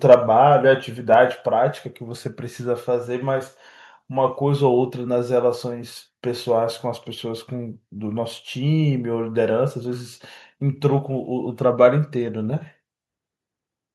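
Between 0.11 and 0.14 s the speech picks up a harsh, crackling edge on a loud peak. This is microphone overload, likely from an input level set so high that the peaks ran about 3 dB past the converter's ceiling. Around a tenth of the samples in that stretch are clipped flat. On a waveform the peaks show squared-off tops, and a spectrogram shows a brief vertical smear of broadband energy from the distortion.

Straight after, at 0.14 s, the voice and background drop together by about 2 dB, and at 1.14 s they drop again by about 3 dB. These are microphone volume stepped down events, likely the call software cutting the device's input gain in single steps after detecting the overload. Each is heard as a sudden step in loudness with no change in tone. The waveform envelope shrinks abruptly at each point, and the spectrogram darkens evenly across all frequencies from that moment on.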